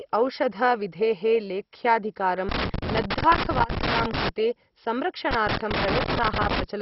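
From the start the speech is dull and gurgling, with a granular edge, which points to heavy MP2 compression, likely at a very low rate around 32 kbps: upper sub-bands are switched off, so a spectrogram shows nothing above 5.6 kHz and patchy, flickering blocks below.

Loose connector crackle runs from 2.49 to 4.29 s and again from 5.31 to 6.64 s. A contact is repeatedly breaking and remaking, chopping the signal into irregular scratchy bursts that appear as jagged spikes and gaps in the waveform and broadband vertical streaks on a spectrogram.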